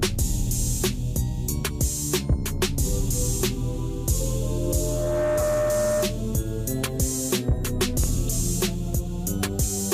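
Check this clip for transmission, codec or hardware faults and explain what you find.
Two faults are audible: a feedback squeal and a Bluetooth stutter.

From 4.41 to 6.35 s there is a loudspeaker feedback squeal. A pure tone at 607 Hz rises out of the sound over roughly 0.7 s. It then holds at about the same level as the programme. The microphone is hearing the loudspeaker it feeds. At 607 Hz the loop gain tops one, so that frequency feeds itself and swells.

At 8.04 s there is a brief Bluetooth stutter lasting about 0.04 s. A short slice of sound repeats. The sound then resumes further on, as if it had kept playing. Data reached the receiver late or not at all, so it replayed its last buffer. The gap fits a single lost frame of about 23 ms.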